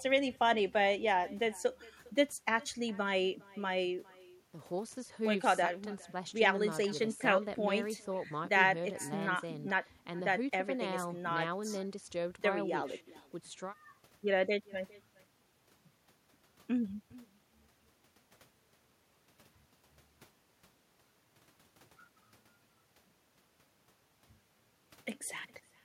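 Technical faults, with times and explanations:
Throughout: echo with no canceller. The far end plays the speech over a loudspeaker, and its microphone sends it back unremoved. A faint copy trails each phrase by about 0.4 seconds. It sits about 25 dB below the speech, and sounds thin.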